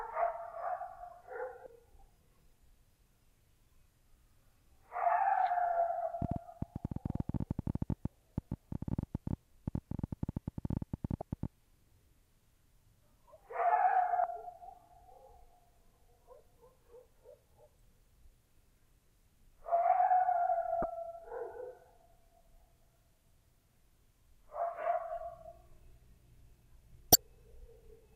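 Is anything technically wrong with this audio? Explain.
Yes. At 1.63–1.66, 11.19–11.22, 14.21–14.24, 20.81–20.84 and 27.12–27.15 s, brief glitches reveal damaged data in a compressed stream: corrupted frames make the decoder lose sync and jump to the next header. From 6.22 to 11.46 s, a train of clicks ticks unevenly at about 13 per second, around seventy in all, peaking about 15 dB above the audio, likely from electrical interference or a faulty connection.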